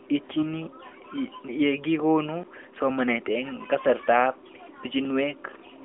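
From 0.34 to 0.45 s there are AMR bit errors. Over a weak link, a few percent of the less-protected bits in the AMR frames arrived flipped, but the checksum on the critical bits still passed, so the decoder used them. The pulse positions and the fine pitch, gain and spectral values came out wrong. For about a tenth of a second, which fits five 20 ms frames, the narrowband sound turns hoarse and gargly while keeping its rough pitch and level.

At 1.48 s, just before "ye kikonu somanet", there is a block of digital silence. Most likely the output buffer went unfilled, and a short run of samples was replaced with zeros. The gap lasts 5.8 ms, which fits a 256-sample buffer. Because the sound drops to zero and returns with no fade, both edges are abrupt, and the hole is too short to hear as a gap. It comes through as a tick or dip.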